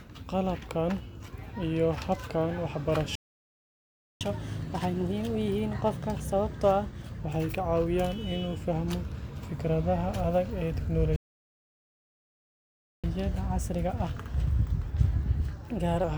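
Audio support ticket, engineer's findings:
Playback stall, 3.15 to 4.21 s: speech cuts to silence mid-flow for about 1.05 s. Player output starved; likely buffer underrun or blocked audio thread. Playback stall, 11.16 to 13.04 s: same symptom, longer gap of about 1.87 s. Likely the same starvation in the playback buffer or decode thread.

Catch-up at higher speed, 4.21 to 7.21 s: speech runs fast at 1.15x with pitch raised about two semitones. The player is resampling its backlog to recover the lost time. Catch-up at higher speed, 13.04 to 16.04 s: 1.1x, pitch up about one and a half semitones, for 3 s. Same resampling recovery after the second stall.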